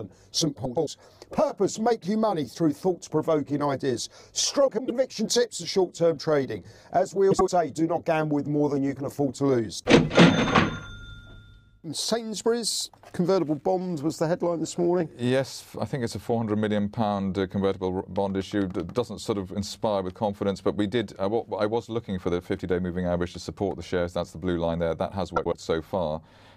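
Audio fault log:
0.65–0.88 s, 4.67–4.90 s, 7.31–7.49 s and 25.36–25.54 s, frames out of order: each stretch breaks into a brief garbled flutter. Two adjacent blocks of audio play in swapped order, each about 105 ms long in the first two events and about 78 ms in the last two, which fits runs of four and three codec frames. The three joins no longer line up, but no time is lost.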